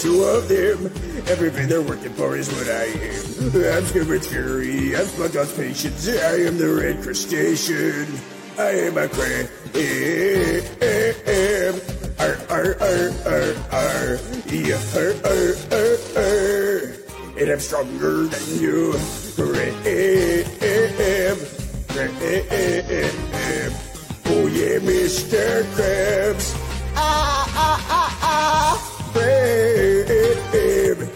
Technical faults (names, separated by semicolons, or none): compressed frames skipped